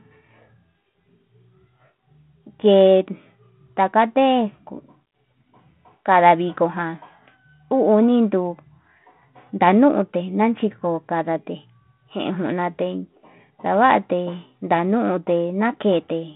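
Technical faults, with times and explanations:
No technical faults can be heard in this clip.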